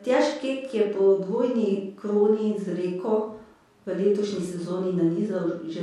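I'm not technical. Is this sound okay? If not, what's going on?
Yes, it's fine: nothing in this speech recording sounds broken or glitchy, so there's nothing to worry about.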